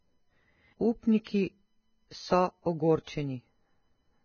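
Speech with heavy Vorbis compression damage throughout: treble is hissy and grainy, consonant attacks blurred, and a spectrogram shows a hard ceiling near 6.5 kHz with noisy, smeared texture below it. The likely cause is low-quality encoding, consistent with roughly 16 kbps.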